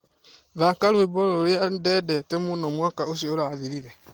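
From 2.44 s to the end, faint computer activity noise buzzes at roughly 70 pulses a second. Computer load is disturbing the shared audio ground.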